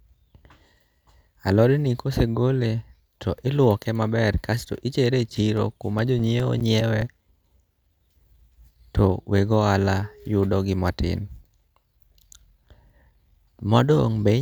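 CD scratch ticks run through this speech clip from 5.57 s to 7.63 s: a regular train of short clicks and tiny gaps, about five a second, of uneven strength, none longer than a few milliseconds. A scratch or blemish on the disc is passing the laser once per revolution, each time wiping out more data than error correction can rebuild, so the player interpolates or briefly mutes the missing samples.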